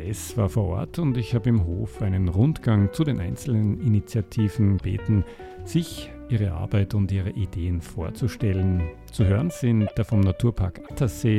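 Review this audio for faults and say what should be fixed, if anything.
There are three short bursts of damaged data in a compressed stream. They fall at 4.74 to 4.81 s, 9.84 to 9.92 s and 10.83 to 10.91 s. Each lasts under a tenth of a second. Some bytes in the encoded stream were corrupted there. The decoder could not read those frames correctly. It lost its place and had to hunt for the next valid frame header. Each event comes through as a brief glitch in the sound. To prevent this, deliver the file over a checksummed or error-corrected path and verify its integrity before decoding.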